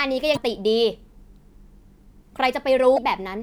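At 0.33 to 0.37 s and again at 2.94 to 2.99 s, the speech breaks for about 44 ms, a sign of damaged data in a compressed stream. Corrupted bytes leave the decoder misreading those frames and losing sync until it finds a valid header.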